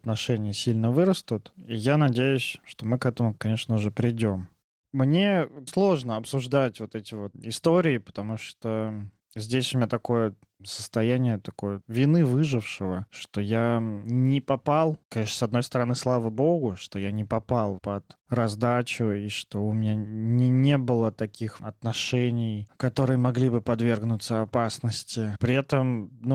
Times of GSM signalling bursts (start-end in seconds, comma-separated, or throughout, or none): none